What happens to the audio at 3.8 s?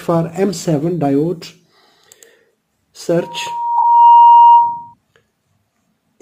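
At 3.8 s two things are stacked. A loudspeaker feedback squeal is already underway. It starts at 3.21 s, where a microphone is hearing its own loudspeaker and the loop gain at one frequency has crept past one. That lone tone, at 944 Hz, swells over about a second until it sits roughly 10 dB above the rest of the sound, and it keeps howling until it stops at 4.94 s.

Right in the middle of that, from 3.77 to 3.84 s, you get a corrupt frame decoded. Flipped bits in the compressed stream went to the decoder anyway, so energy landed at the wrong frequencies for that stretch. That's heard as a short, harsh burst peaking near -5 dBFS, and its length points to something like four damaged frames in a row.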